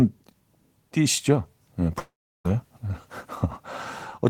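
At 1.99 s the speech cuts out until 2.47 s. The last sound carries on as a fading buzz, and then comes about 340 ms of silence. Speech resumes with roughly 460 ms missing. The likely cause is a long network dropout, where the audio never arrived.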